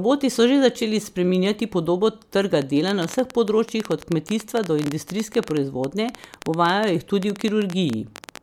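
From 2.62 s, right after "začeli spreminjati podobo trga", a train of clicks runs to 8.38 s: around seventy similar sharp pops at about 10.9 per second, unevenly spaced, ticking over the speech and through its pauses. They peak roughly 10 dB above the speech. The likely cause is interference from nearby equipment or a faulty connection or power supply. On a waveform they show as narrow spikes. A spectrogram shows thin vertical lines spanning all frequencies.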